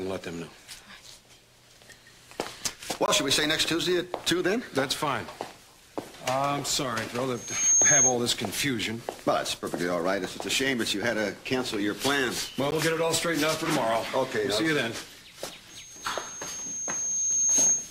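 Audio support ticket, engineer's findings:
Block of digital silence: hard-edged dropout. 3.06–3.08 s (20 ms) and 12.71 s (about 14 ms). The output buffer was likely not filled in time, so zeros were played and the cut was made with no fade.

Loudspeaker feedback squeal: a 6.4 kHz tone swells to about 10 dB above the program. 7.35–8.17 s, building in under half a second. From 15.70 s to the end, building over roughly 2 s. The mic is picking up its own monitor, and loop gain exceeds unity at 6.4 kHz.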